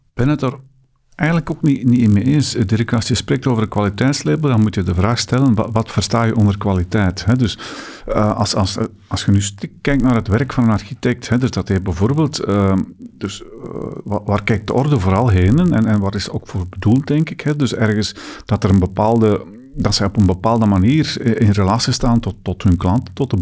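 From the start of the speech to its end, a resampler restarted on every block produces a steady 50 Hz buzz under the voice. The rate conversion, consistent with 44.1 kHz down to 16 kHz, treated each 20 ms block in isolation, so every block edge was computed without its true neighbouring samples and carries a small error. On a waveform this appears as tiny discontinuities every 20 ms. A spectrogram shows faint vertical stripes at that spacing, with a comb of lines at multiples of 50 Hz, present only where the speech has energy.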